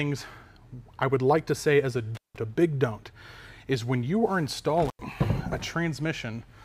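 The sound drops out with crackly edges at 2.15 to 2.37 s and 4.85 to 5.04 s, briefly silent for about 174 ms and 90 ms: intermittent contact from a loose cable or plug.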